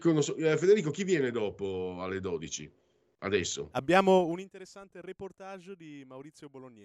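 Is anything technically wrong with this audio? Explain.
Yes. From 4.17 to 4.53 s the speech drops by roughly 20 dB in 2 dB jumps, around forty a second, with no smoothing between them. That is zipper noise: each step clicks, so a fast ticking rides on the fade, unlike a smooth fader move, which sounds clean.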